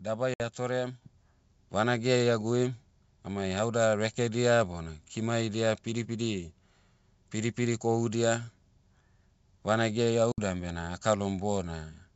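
Packet loss on an ADPCM call at 0.34 s and again at 10.32 s: each time about 60 ms of audio, a few packets' worth, drops out as a hard-edged silent gap. When sound resumes, the receiving decoder's predictor and step size no longer match the sender's, so the speech comes back slightly distorted before settling.

Microphone volume stepped up at 1.02 s: the call software judged the input too quiet and raised the device gain in a single jump of about 6 dB. The speech and the background noise both become louder at once, with no gradual ramp.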